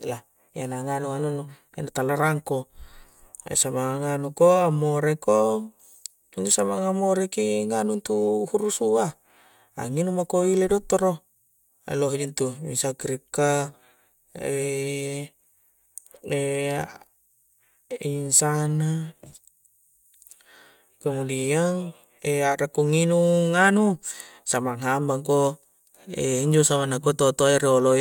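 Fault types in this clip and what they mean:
Nothing stood out on listening to the speech here.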